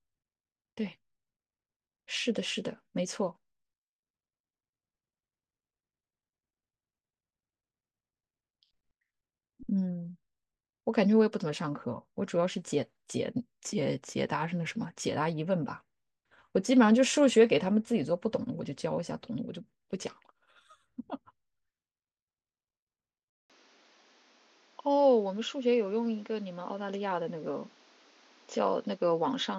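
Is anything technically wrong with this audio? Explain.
Yes. Input switched to a poorer device at 23.3 s, to the end. The recording likely moved to a narrower-band microphone: after a 200 ms silence, speech turns dull and boxy with nothing above 7.2 kHz, drops a few decibels, and carries new background noise.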